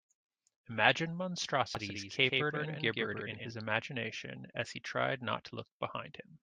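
Speech, with a doubled audio track from 1.75 to 3.51 s: a second full-band copy trails by around 150 ms, roughly 5 dB down, likely a second, slower capture path.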